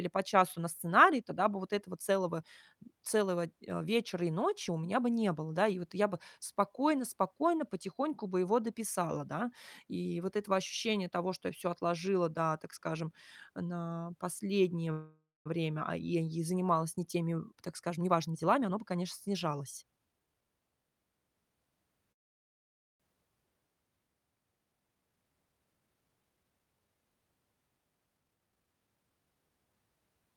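From 14.91 s to 15.48 s the speech stops and the last sound carries on as a brief fading buzz, falling to silence for about the final 0.2 s before the speech resumes where it left off. This is a call audio freeze, likely caused by packets held up in transit that left the jitter buffer empty, so about 0.54 s was inserted and nothing was lost.

From 16.97 s to 20.42 s the speech sounds hurried but keeps its pitch, running at about 115% speed. This is a jitter buffer speed-up. The buffer held too much audio, and the receiver trimmed many short pitch-period pieces in a row, removing roughly half a second to shrink the delay.

A second call audio freeze runs from 22.12 s to 23.02 s. This one is almost entirely silent for nearly 0.9 s, with the sound picking up again without loss, again likely from a packet stall that emptied the buffer.

From 28.17 s to 29.74 s a stronger jitter buffer speed-up pushes the speech to about 136% speed, clearly rushed at unchanged pitch. 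Roughly half a second was again cut out in pitch-period pieces.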